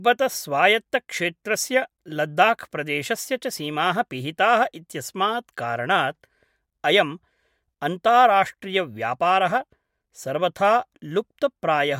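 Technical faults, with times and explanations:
No technical faults can be heard in this speech recording. There is nothing to list with a time or an explanation.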